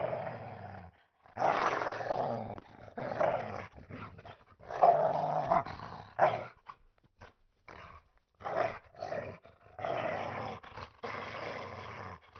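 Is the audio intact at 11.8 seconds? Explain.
Yes, the audio is intact at 11.8 seconds, with no dropout, glitch or other fault at that moment.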